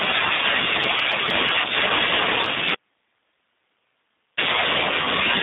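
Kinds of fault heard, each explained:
G.729 codec: narrowband speech held to roughly 150 Hz to 3.7 kHz, with a rough, synthetic buzz from 8 kbit/s model-based coding, not simple low-pass dulling.
Audio dropout to a faint residue: from 2.75 to 4.37 s the speech vanishes abruptly, leaving only hiss far below the signal, likely a lost feed rather than a pause.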